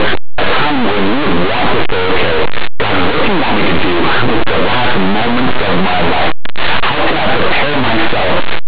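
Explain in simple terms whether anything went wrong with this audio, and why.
The speech has loud, harsh distortion from start to finish. This is linear audio read as companded. Plain 8-bit samples were decoded as mu-law codes, so small values just on one side of zero become loud, while those on the other side stay small.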